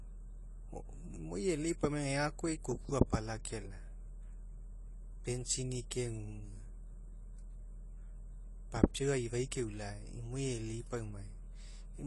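Throughout, the speech sounds dull and smeared, with nothing above 11.5 kHz, a pattern that likely points to AAC compression at a low bitrate, around 32 kbps.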